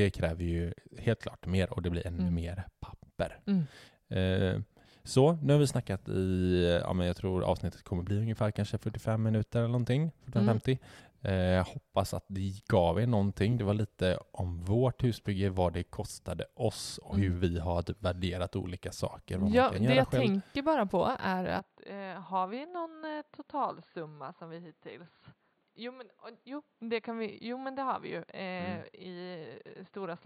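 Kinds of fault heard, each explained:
Input switched to a poorer device: At 21.59 s the speech suddenly turns dull and boxy, and it stays that way to the end. From that point nothing above 4.6 kHz comes through. The level drops by roughly 10 dB. A new, faint background noise appears, far below the speech. There is no gap at the change. This is likely the input jumping to a narrower-band microphone or headset, which brings its own tone, level and noise.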